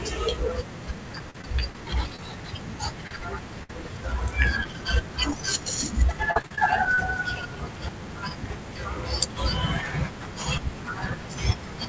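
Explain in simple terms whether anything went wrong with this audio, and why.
Twice the speech turns choppy and robotic, from 1.19 to 1.75 s and again from 6.07 to 6.98 s. This is repeated packet loss (robotic sound): chunks of the call kept arriving late or not at all, and each hole was patched by stretching the last sound.

Brief smears or wobbles at 2.16, 3.07, 4.43, 4.64 and 5.31 s come from short concealed packet loss. Each time, a tiny slice of audio, no more than about three hundredths of a second, went missing and was papered over by continuing the sound just before it.

At 3.63 s a burst of packet loss leaves a longer gap of about 50 ms. The last sound is held and fades for that moment. Then the speech picks up slightly further on, with that bit skipped. Throughout, the call codec carries nothing above 8 kHz.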